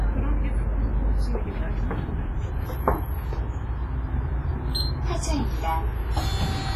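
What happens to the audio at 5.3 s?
At 5.3 s the audio has been through a low-bitrate transform codec, likely WMA compression. The heavy damage fits a stream of about 24 kbps. Long transform blocks smear quantisation noise over tens of milliseconds, and weak spectral lines are zeroed. The result is a ringing, washy texture with hiss that swells and fades with the signal, and nothing above 15.4 kHz. This runs through the whole clip, not just that moment.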